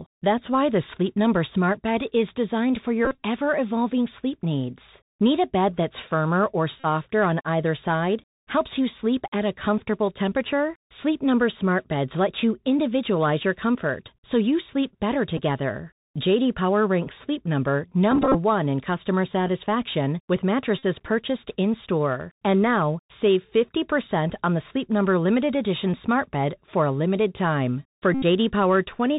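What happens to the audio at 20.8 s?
Voice packets between the headset and the phone went missing just after "in customer satisfaction with", from 20.79 to 20.83 s. The chip filled the gap by decoding the last good packet's bits over and over, covering about 41 ms, which fits a run of roughly eleven lost packets. Because each repeat recurs every 3.75 ms, this Bluetooth headset packet repeated fault comes out as a short steady buzz near 267 Hz until good packets arrive again.

Underneath, the whole clip, this moment included, passes through the Bluetooth CVSD headset codec, a narrowband one-bit-per-sample scheme at 64 kHz whose adaptive step tracks the waveform up or down. Nothing above 4 kHz gets through, so the speech around the buzz is band-limited. Loud high content outruns the step and distorts, s sounds turn scratchy, and a granular hiss sits beneath the speech, all plainly audible.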